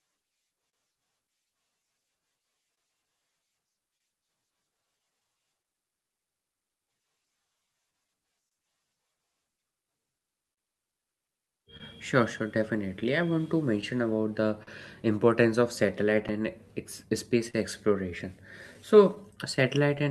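Clock drift between sender and receiver runs through the whole clip. The sender's clock runs roughly 2 percent slow, so the jitter buffer keeps draining and the receiver must stretch or repeat brief pieces of speech, causing small timing hiccups at uneven intervals.

Scattered short gaps fall between 0.69 s and 20.0 s: around thirty lost or late packets, the longest about 40 ms, together roughly half a second. Each hole is patched by continuing the previous sound, giving brief ticks and smears. The Opus call path's 12 kHz bandwidth, which fits about 48 kbps, tops off the high end.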